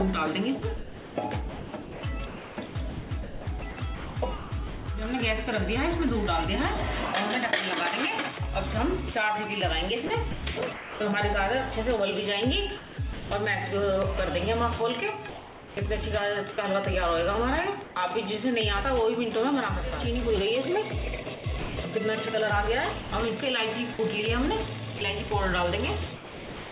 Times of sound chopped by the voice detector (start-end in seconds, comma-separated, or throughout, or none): 0.59-4.88, 10.07-11.00, 12.77-13.31, 15.29-17.96, 21.23-26.71